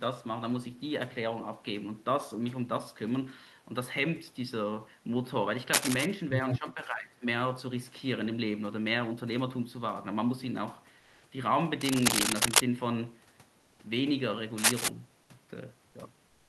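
A speech recording with three kinds of contact and echo trouble plus one patch of synthetic background. Cable scratch noise shows up three times, from 5.73 to 6.06 s, 11.81 to 12.61 s and 14.58 to 14.88 s: dense, uneven rustling and crackle sitting right over the voice at about 5 dB louder than the speech. That's likely a worn cable, plug or control being moved so its contact resistance jumps around and throws bursts of noise into the line. Right after the first scratch, at about 6.51 to 6.58 s, there's a brief scrap of the other side's voice leaking through, a fragment about as loud as the talker. That's likely the far end coming out of the talker's loudspeaker and getting back into the microphone because the echo canceller didn't fully remove it. Straight after that, from 6.59 to 7.26 s, you get speech suppressed in double talk. The talker's voice dips and gets patchy for around half a second in total, dropping by something like 10 dB at its worst. 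That's likely the canceller hearing both sides at once, failing to separate its own talker from the echo, and turning everything down. Finally, from 10.99 to 11.23 s, about 240 ms of comfort noise takes the place of the background. The natural room sound, sitting about 34 dB below the loud parts, gives way to a steady, featureless hiss only about 1 dB different in level. It's likely discontinuous transmission, and it sounds consistent with Opus DTX: the sender stops sending during the gap and the receiver fills it with shaped synthetic noise.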